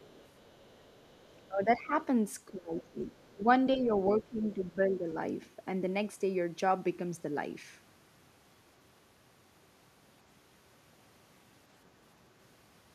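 From 0 to 1.48 s, a faint second voice, the other side's voice leaking through, sits roughly 30 dB under the main speech. The likely cause is loudspeaker sound reaching the microphone that the echo canceller failed to remove. On a spectrogram it shows as weak, separate harmonic traces running beneath the stronger speech bands.

Speech suppressed in double talk follows at 1.48 to 1.93 s, dipping around 15 dB. The echo canceller, likely confused by both sides talking at once, pulled down the talker along with the echo. A deeper dip of about 20 dB follows between 2.47 and 3.49 s, covering most of that span. Inside it, brief leaked scraps of the other voice appear at 2.78 to 2.89 s, about 20 dB down, and at 3.24 to 3.32 s, barely there at about 35 dB down. A slight dip of about 5 dB comes at 3.76 to 3.93 s, then another drop of about 15 dB through most of 4.2 to 5.07 s. On the waveform these show as sudden sags in the envelope, and on the spectrogram the speech bands weaken during each dip.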